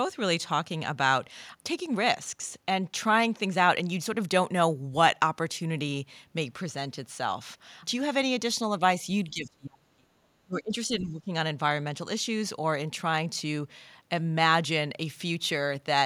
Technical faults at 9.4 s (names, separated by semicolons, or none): speech suppressed in double talk